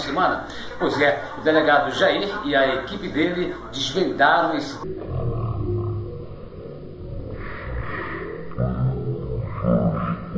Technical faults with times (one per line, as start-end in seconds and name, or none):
4.84-10.37 wrong sample rate